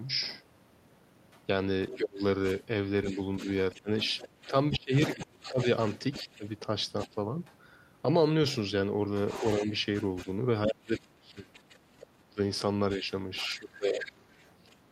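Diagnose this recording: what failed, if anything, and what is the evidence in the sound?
Call processing is where this went wrong, with the other side's voice leaking through. There's a faint burst at 0.21–0.39 s, about 25 dB down, then longer stretches at 1.31–7.55 s and 8.47–14.76 s, sitting about 15 dB under the talker. It's likely the echo canceller leaving loudspeaker playback in the mic feed.

Then there's speech suppressed in double talk, again in the call processing. While both sides overlap, between 1.92 and 7.16 s and again from 9.41 to 14.41 s, the talker's voice ducks in pieces, dropping by up to roughly 25 dB and then 30 dB, totalling around one and a half seconds and two seconds. That's likely the canceller failing to separate its own talker from the echo and turning both down.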